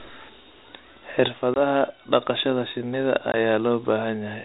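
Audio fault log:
1.28 s to end, sudden gain jump: the digital gain most likely dropped from one sample to the next with no ramp, as when a level setting is applied in a single step. The sound and its background noise fall together by about 6 dB at 1.28 s and stay at the lower level for the rest of the clip. Because both drop at once, the change reads as a level step rather than a quieter passage.
1.54 s and 3.32 s, packet loss on an ADPCM call: roughly one packet was lost each time, leaving a 20 ms silent hole with hard edges. The call runs on G.726 ADPCM, which sounds consistent with 32 kbit/s, and nothing above 4 kHz comes through. ADPCM sends each sample as a difference from a prediction, so after each gap the receiver's adaptive predictor and step size no longer match the sender's. The speech comes back slightly distorted, then settles within some tens of milliseconds.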